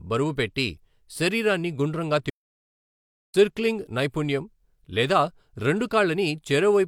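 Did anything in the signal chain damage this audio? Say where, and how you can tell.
Yes. The fault sits at the playback stage, where the player was likely starved of data or had its output thread blocked. The result is a playback stall: at 2.30 s the speech cuts to silence in mid-flow, and nothing comes out until 3.34 s, a gap of about 1.04 s. That is far too long and abrupt to be a natural pause, so the output path stopped delivering samples for that stretch.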